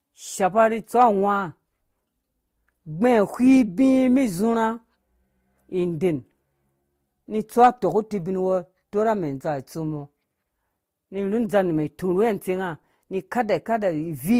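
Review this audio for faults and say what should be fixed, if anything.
Throughout the speech, two layers of smeared, watery codec artefacts are heard at once. This is likely transcoding between lossy codecs, consistent with a Vorbis encode re-encoded to Opus at a low bitrate. A spectrogram shows blurred, blocky upper bands and nothing above 19.8 kHz. Prevent it by encoding once, directly from the original lossless source.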